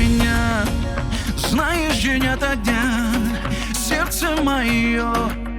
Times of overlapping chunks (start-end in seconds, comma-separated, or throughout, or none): none